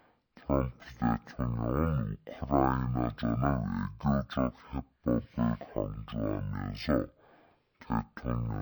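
From start to finish the audio shows a stereo read as mono fault: alternating left and right samples were consumed as one channel, so everything plays at 0.5x speed and 12 semitones low. A spectrogram shows stretched, downshifted features plus a fainter mirrored copy across the upper half of the spectrum.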